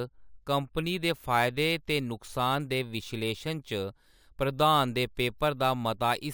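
Throughout, crude rate conversion repeats samples instead of filtering, which fits a change from 32 kHz to 44.1 kHz. Its error, roughly 20 dB under the speech, adds gritty inharmonic fizz to loud, bright syllables. Spectrograms show stray partials off the harmonic series, and waveforms show tiny stair-steps.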